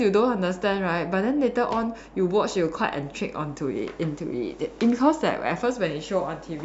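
No technical faults are audible anywhere in the recording.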